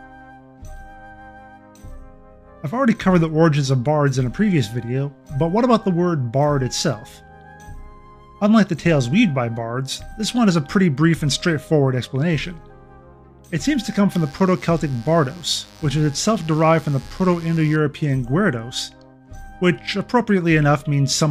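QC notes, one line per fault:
14.11–17.76 s, mains buzz: an unshielded or dimmer-fed line injects switching spikes at 100 per second on 50 Hz mains, adding a raspy buzz well beneath the sound.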